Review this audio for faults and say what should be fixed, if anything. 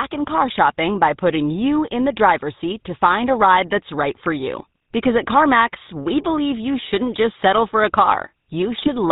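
The whole recording has passed through the GSM full-rate codec, whose roughness fits the 13 kbps full-rate coder. The coder models the vocal tract and drives it with a coarse pulse excitation that keeps only one sample in three, and it discards everything above 4 kHz. The speech therefore sounds plainly buzzy and gravelly throughout, with a dull, band-limited top end and a grainy texture on voiced sounds. To prevent it, carry the call over a wideband or modern codec path, or capture the audio locally before it reaches the GSM leg.

GSM bit errors appear near the end, from 8.78 to 8.89 s. Corrupted bits reached the decoder at an error rate of about 1.2 percent, damaging the filter, pitch or gain parameters over a short run that sounds like five frames. Each hit frame is rebuilt with a distorted spectrum or wrong level, so the speech there breaks into a brief squawk and gargle. To prevent it, improve the radio link's signal quality or use a path with stronger error protection and bad-frame concealment.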